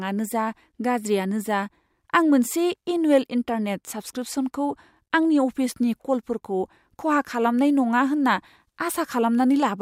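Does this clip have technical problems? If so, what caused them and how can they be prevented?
No, this clip has no technical problems, so there is nothing that needs to be prevented.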